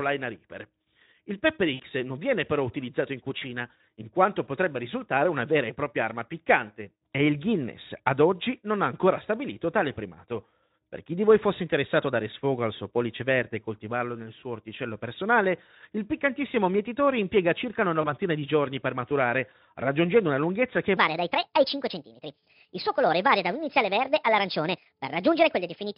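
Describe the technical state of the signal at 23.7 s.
At 23.7 s the speech sits inside a section at the wrong speed, running from 20.97 s, just after "raggiungendo una lunghezza che", to the end. It plays 1.39 times too fast, likely from a wrong playback clock, so pitch rises about five semitones and delivery sounds hurried. A spectrogram shows harmonics and formants shifted upward and syllables squeezed closer together.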